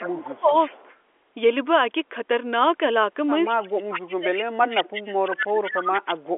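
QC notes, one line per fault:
0.00–0.74 s, 3.88–6.01 s and 6.34–6.37 s: speech suppressed in double talk. The speech dips by up to about 15, 30 and 40 dB while the far end speaks, likely because the echo canceller turns down the near talker along with the echo.
0.03–0.96 s, 3.47–3.83 s, 4.76–5.02 s and 5.64–6.16 s: echo leak. A copy trails the speech by 171 ms, about 10 to 20 dB below it. This is likely loudspeaker pickup that the canceller failed to remove.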